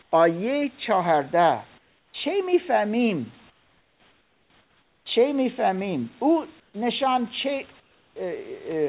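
At 0.02–0.12, 1.78–2.14, 3.5–5.06, 6.6–6.74 and 7.8–8.16 s, comfort noise replaces the background: a flat hiss about 10 dB quieter, likely from discontinuous transmission. On a spectrogram these gaps show as smooth, uniform grey. The waveform drops to a thin, even band.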